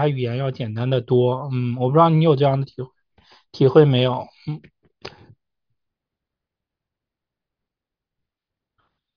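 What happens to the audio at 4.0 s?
Nothing goes wrong at 4.0 s; the audio plays through that moment intact, with no dropout, click or distortion.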